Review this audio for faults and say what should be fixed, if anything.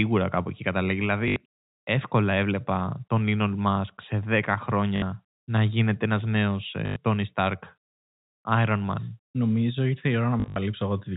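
Packet loss with last packet repeated shows up as four short robotic stutters. The first runs 1.28–1.36 s, right after "κάπου εκεί καταλήγει" and before "εύκολα έβλεπα τον". The second runs 4.96–5.02 s. The third runs 6.86–6.96 s, after "να γίνεται ένα νέο". The last is scattered over 10.40–10.56 s after "ήρθε η", with its longest run about 60 ms.

Each gap was filled by replaying the previous chunk. The stutter lengths fit 20 ms packets, which gives a 50 Hz buzz. On a waveform these look like identical repeating blocks. On a spectrogram they show as a smeared, frozen stretch.

Preventing it needs a steadier network path plus packet loss concealment or forward error correction, rather than plain repetition.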